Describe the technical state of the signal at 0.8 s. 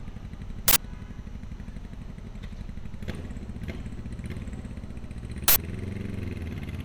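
Around 0.8 s the signal has just come out of an uninitialised buffer fault spanning 0.68 to 0.76 s. For those 80 ms, one audio block was sent to playback before any real samples had been written into it, so whatever stale data sat in that memory was played as audio. The result is a short, loud burst of harsh digital noise that abruptly replaces the sound for the length of that block.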